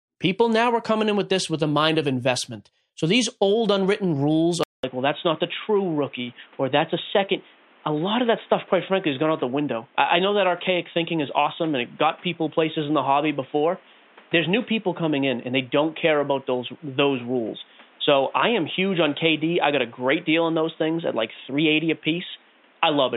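At 4.63 s the speech gaps for 200 ms, then turns dull, with nothing above 3.8 kHz. The input likely switched to a poorer device.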